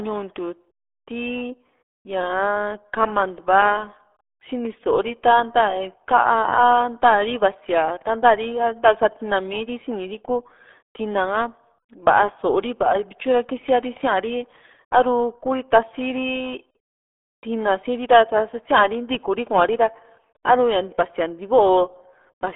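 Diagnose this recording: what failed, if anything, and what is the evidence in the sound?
Codec stage: the whole speech clip has the muffled, gargly RealAudio 14.4 codec sound, band-limited to roughly 300 Hz–3.5 kHz with nothing above 3.8 kHz, which fits an 8 kbit/s dial-up codec.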